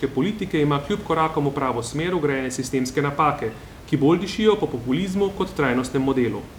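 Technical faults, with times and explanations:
Nothing stood out on listening, and the room noise, about 19 dB below the speech, belongs to the recording space rather than the system.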